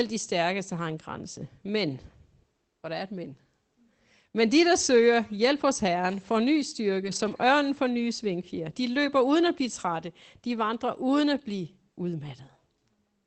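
Between 7.03 and 7.33 s, a lost packet rebuilt from error correction: packets dropped, and the decoder played the low-bitrate copies carried in the following packets, about 160 ms in total. The speech turns rougher and noisier there but never breaks, which sets it apart from a gap or concealment dropout.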